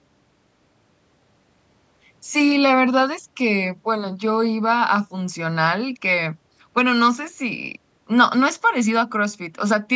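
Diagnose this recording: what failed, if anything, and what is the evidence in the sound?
Nothing failed: there is no evidence of a fault in the sound, only normal call microphone processing, which trims the lowest bass and leaves nothing above 8 kHz.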